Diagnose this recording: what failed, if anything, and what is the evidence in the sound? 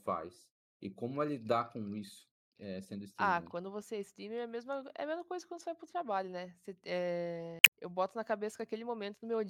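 The fault sits at the codec stage: damaged data in a compressed stream produces a short glitch from 7.56 to 7.68 s in the speech. Corrupted bytes made the decoder misread frames and resynchronise.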